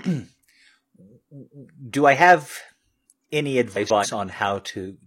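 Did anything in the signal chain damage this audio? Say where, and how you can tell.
Yes, at the network stage: frames out of order from 3.72 to 4.06 s. Two blocks of about 139 ms play swapped, giving a garbled flutter.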